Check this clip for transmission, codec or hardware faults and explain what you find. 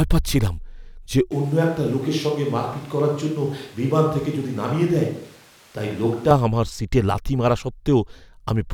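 One fault is present: a switch to a distant microphone from 1.32 s to 6.31 s, starting just after "পাচ্ছিলাম যে" and ending just before "আমার সিটে লাথি মারা". The speech abruptly turns roomy and hollow, loses low-end weight, and drops about 5 dB, with background room noise rising to roughly 30 dB below the speech. The likely cause is that the close microphone's feed dropped out and a farther pickup, such as a camera microphone, carried the signal until the close feed returned.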